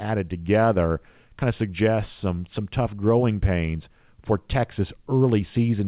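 Nothing's technically wrong with this speech clip; it simply carries the narrow phone-call sound of a call path with nothing above 4 kHz, which is just how that kind of link sounds.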